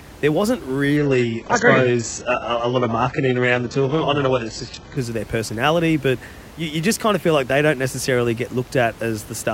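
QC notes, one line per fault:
0.97–4.97 s, adaptive stream at a lower bitrate: after "there wasn't" the speech abruptly turns dull, with nothing above 8 kHz and gurgly codec artefacts, then recovers before "of their personality but" with no gap. This points to a connection slowdown forcing a switch to an HE-AAC stream of about 8 kbit/s.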